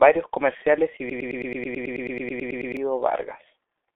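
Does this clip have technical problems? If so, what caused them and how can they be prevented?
Yes. The speech is muffled and hoarse throughout, with blurred consonants, because it went through the G.723.1 codec. Nothing reaches above 3.7 kHz, and the line band runs from 300 Hz to 3.5 kHz. The heavy damage fits a rate near 6 kbit/s. To prevent it, use a wideband codec at a higher bitrate.

From 1.10 s to 2.77 s, just after "comerciales y", a broken-record loop repeats a 108.5 ms fragment 15 times back to back. The audio that belonged there is lost. The likely cause is a stalled player or stream resending its last buffer. To prevent it, add stall detection that mutes or skips instead of repeating.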